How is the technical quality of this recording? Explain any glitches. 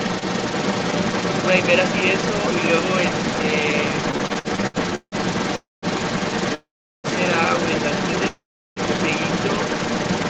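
The recording is technically poor: a second voice runs under the speech throughout, and the second half stutters and freezes repeatedly.

Other side's voice leaking through, from 0 to 10.3 s: a second voice sits at about the same level as the main speech. The likely cause is an echo canceller failing to remove the far end's loudspeaker sound from the microphone.

Repeated stalls (stutter), from 4.11 to 5.15 s: the audio drags and stutters through ten brief holds, the longest 167 ms, filling about 39% of that stretch. Late packets kept emptying the jitter buffer, and the receiver stretched the last sound each time.

Call audio freeze, at 5.56–5.85 s, 6.54–7.07 s and 8.28–8.79 s: each time the sound hangs, fades, then goes silent before resuming where it stopped. The fills last 266 ms, 494 ms and 485 ms, the silences 180 ms, 380 ms and 360 ms. The likely cause is packets held up in transit, which drained the jitter buffer.

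Throughout, nothing is heard above 8 kHz, which fits the call's Opus codec band limit.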